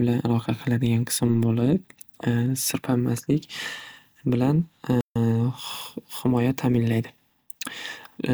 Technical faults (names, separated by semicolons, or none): playback stall